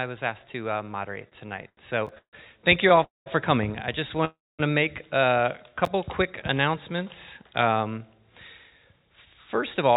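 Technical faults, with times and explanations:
1.22–2.99 s, repeated stalls (stutter): the buffer ran dry 14 times, the longest gap 146 ms. Each was bridged by stretching the last sound, so the passage drags and stutters without losing content.
2.07–2.09 s and 5.85–5.88 s, chunks out of order: an 11.6 ms chunk played one slot late each time, leaving hard joins heard as a brief jumbled moment.
3.03–3.28 s and 4.25–4.61 s, call audio freeze: sound holds as a fading buzz, then about 160 ms and 230 ms of silence before resuming unchanged. The likely cause is delayed packets emptying the jitter buffer.
5.69–7.05 s, jitter buffer slow-down: repeated pitch periods added 75 ms, so playback runs at 95% speed with unchanged pitch and drawn-out sounds.
8.64–9.92 s, jitter buffer speed-up: about 150 ms trimmed as short pitch-period cuts, so the audio runs at 109% speed, sounding hurried at the same pitch.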